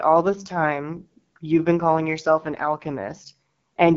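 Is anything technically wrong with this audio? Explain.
Yes. Throughout, the speech carries AMR wideband (HD Voice) codec damage: nothing above about 7.2 kHz, and a rough, raspy texture because the vocal tract model is starved of bits, which fits a low rate near 8.85 kbit/s. The 7 kHz ceiling and codec rasp set it apart from narrowband telephony or a plain low-pass filter.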